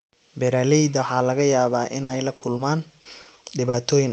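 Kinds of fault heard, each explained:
Repeated packet loss (robotic sound), 1.99 to 3.75 s: the speech turns choppy as the stream keeps dropping out, with six short holes, the longest 60 ms, about 260 ms in all, roughly 15% of that stretch. Each gap is patched by stretching the last received sound forward, and the next loss arrives before the decoder recovers. About 260 ms of synthetic fill, roughly 200 ms of it only roughly rebuilt, is laid over the Opus call audio, which is limited to 8 kHz.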